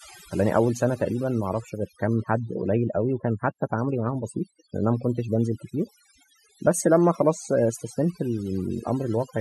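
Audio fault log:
Throughout, overdone noise removal: the background between phrases drops to an unnatural near-silence scattered with twinkling, chirpy specks, while the quieter parts of the speech are pulled away with it. A noise reduction stage was driven too hard, so each frequency band that dipped close to its noise estimate was pulled down or shut off, taking the weaker parts of the voice along with the noise and leaving isolated bands flickering on and off.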